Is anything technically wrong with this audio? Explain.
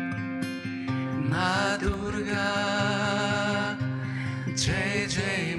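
Yes, there's one problem. At about 1.94 s there's a block of digital silence: the audio drops to silence for roughly 0.73 ms, which fits a dropped block of 32 samples, and then picks straight back up. There's no fade either way, so the waveform jumps to silence and back, and the two edges sit so close together that they merge into a single sharp tick rather than an audible hole.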